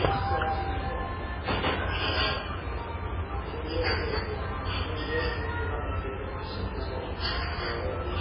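MP3 compression, heard throughout, likely explains the heavy damage. Nothing survives above 5.3 kHz, leaving the audio dull, while weak frequency lines flicker on and off between frames, giving a watery, swirling texture with smeared attacks. That fits a starved bitrate near 16 kbps.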